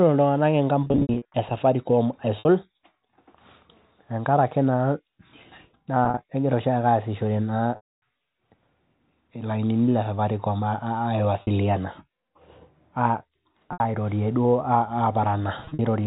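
Speech over a narrowband telephone path, band-limited at 4 kHz as G.711 coding would be, with packet loss with pitch repetition. Gaps occur at 0.84–1.34, 2.39–2.45, 6.05–6.17, 7.76–8.02, 11.42–11.47, 13.73–13.80 and 15.65–15.79 s. The receiver repeats the last pitch period to fill each hole. The short losses sound like a briefly held, buzzy tone. The long ones, at 0.84 and 7.76 s, fade toward silence before the speech cross-fades back.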